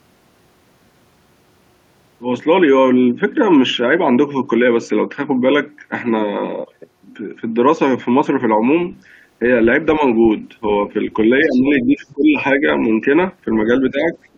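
Speech suppressed in double talk first appears at 9.98 to 10.02 s as a slight dip of roughly 5 dB, then more heavily from 11.44 to 12.38 s, where the speech sinks by as much as about 15 dB. The likely cause is an echo canceller that, hearing both sides at once, could not tell the talker from loudspeaker echo and turned everything down.

Inside that stretch, the other side's voice leaks through at 11.51 to 11.58 s and again at 12.10 to 12.14 s. These are brief, faint scraps about 30 dB below the speech, most likely loudspeaker sound the canceller failed to remove from the microphone.

The suppression returns as a short, shallow dip of roughly 5 dB at 12.58 to 12.65 s and a deeper drop of about 10 dB at 13.91 to 14.16 s. A further faint leak of the other side's voice follows at 14.23 to 14.29 s, about 35 dB down. From 14.32 s to the end, the talker is pulled down by roughly 25 dB.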